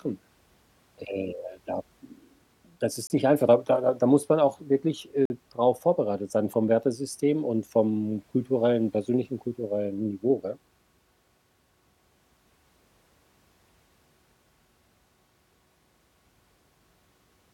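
At 3.07 to 3.10 s and 5.25 to 5.30 s, speech cuts to silence and resumes, before "nicht einfach da da" and after "muss man auch wirklich". This is likely a Bluetooth stall: delayed packets emptied the playback buffer.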